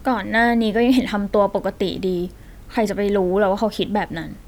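Nothing in the speech stood out as a technical fault on listening.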